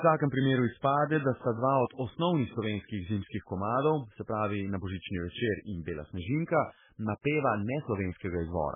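From start to finish the speech carries heavy damage that is likely MP3 compression at a very low bitrate, consistent with something near 8 kbps. Nothing survives above 3.5 kHz, so sibilants lose their hiss and the sound is dull and watery, with swirling texture as weak frequency lines drop in and out between frames and consonant onsets smeared. A spectrogram would show a hard ceiling at 3.5 kHz and patchy, flickering gaps below it.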